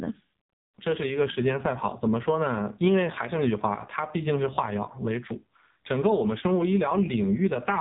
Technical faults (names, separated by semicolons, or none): AMR narrowband mobile codec